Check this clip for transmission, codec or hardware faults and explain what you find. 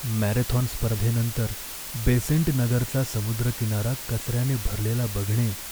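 The speech carries one fault from start to finish: low bit depth with dither. The signal is reduced to very few levels, which fits roughly 5 bits, with random dither added before rounding, so the error becomes a steady, even hiss only around 10 dB below the speech, without distortion. A spectrogram shows a flat, uniform noise floor across all frequencies, and the waveform shows a thick band of noise continuing through the pauses.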